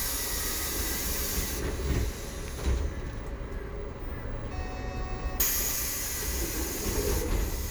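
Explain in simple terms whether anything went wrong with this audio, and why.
There's one small skip at 3.76 s, where a tiny sliver of sound, roughly a hundredth of a second, drops out and the two sides butt straight together. It's likely audio missing between chunks: the recorder handles sound in 2-second pieces and lost a bit at the handover.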